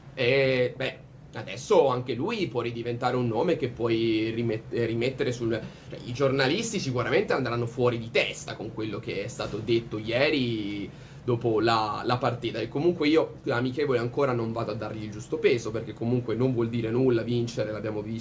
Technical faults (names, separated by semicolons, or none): none